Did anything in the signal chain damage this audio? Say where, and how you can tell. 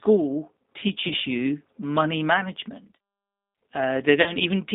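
Yes. At the codec stage, the whole clip carries G.729 codec damage. The speech is confined to roughly 200 Hz to 3.7 kHz and sounds plainly rough and synthetic. That fits an 8 kbit/s G.729A link, which rebuilds each frame from a filter, a pitch predictor and a few pulses.

At the network stage, there is VoIP packet loss concealed by the speech codec at 1.08–1.11 s, covering 20 ms of missing audio, and again at 4.22–4.33 s, covering 40 ms. The decoder extrapolated from the last frame and let it fade out. The damage runs past each gap because every frame builds on the previous one.

From 1.46 s to the end, pre-emphasis has been left on. The sound turns thin, bright and sibilant. The shape points to a 75 µs FM treble-boost curve, roughly 14 dB up at 10 kHz relative to 1 kHz, whose matching de-emphasis cut was never applied downstream.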